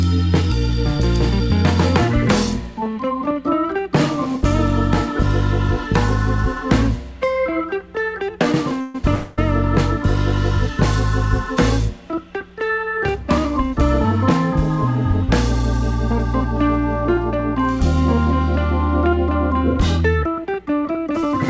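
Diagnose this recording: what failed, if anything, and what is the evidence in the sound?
Two call audio freezes sit close together, at 8.81 to 8.95 s and 9.14 to 9.39 s. In each, the last bit of sound gets stretched into a fading buzz for 133 ms and then 233 ms, and playback picks up exactly where it left off, so nothing's actually lost. The cause is likely packets stalling on the network and the jitter buffer running dry, with the receiver concealing the gap. Those two holds add about 370 ms of extra delay.

Later there is a jitter buffer speed-up from 19.97 to 21.34 s. The receiver repeatedly snips out short pitch-period-sized slices, roughly 150 ms in total, so the audio runs about 11% fast with the pitch unchanged and has a rushed feel. It's the buffer trimming its surplus back toward target delay, all on the receive side. The whole thing went through a wideband call codec with nothing above 8 kHz, which fits G.722 at 64 kbps.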